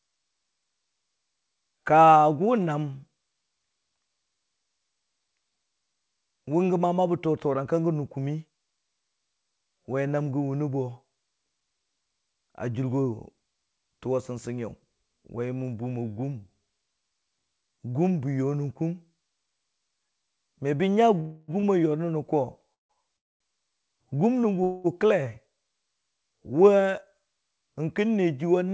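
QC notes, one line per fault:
21.20–21.51, 22.74–22.92, 23.16–23.43, 24.63–24.87 s: call audio freeze. Likely late packets emptied the jitter buffer, so the last sound is stretched into a fading buzz. In the middle two it drops to silence. Speech then resumes without loss.
21.60–21.66 s: short stall from a late packet. One packet arrived late, so the buffer held the preceding sound about 30 ms too long, giving a brief buzzy hold before speech continues.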